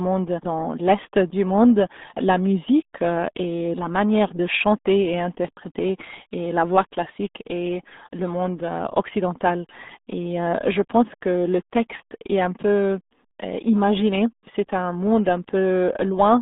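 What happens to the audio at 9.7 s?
At 9.7 s the speech carries the same RealAudio 14.4 codec damage heard throughout: heavy low-rate coding, fitting an 8 kbit/s speech codec, squeezes it into roughly 200 Hz to 3.6 kHz, leaving it muffled and gargly. A spectrogram shows an empty band above 3.8 kHz and smeared, blocky harmonics.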